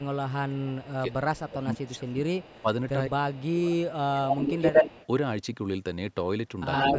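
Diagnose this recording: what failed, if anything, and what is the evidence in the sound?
Speech suppressed in double talk, in the call processing: the speech dips repeatedly from 0 to 4.75 s, about 3 s affected, at worst about 20 dB down, then dips about 5 dB at 6.94–6.99 s. The echo canceller likely mistook both sides talking for echo and attenuated everything.

Echo leak, also in call processing: a delayed copy of the speech sits 167 ms behind from 0.83 to 2.62 s, about 25 dB down, then 107 ms behind at 3.33–5.07 s and 6.73–6.98 s, about 5 dB above the speech. A loudspeaker-side canceller likely left residual echo in what it sent back.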